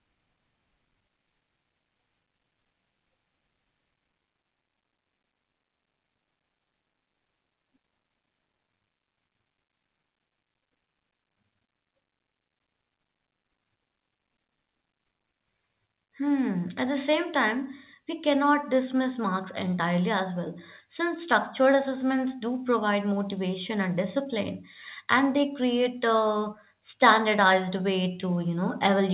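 No technical faults can be heard anywhere in the speech. It comes through a WebRTC call path working as intended, with nothing above 4 kHz and the usual coding noise that fits a narrowband G.711 mu-law codec.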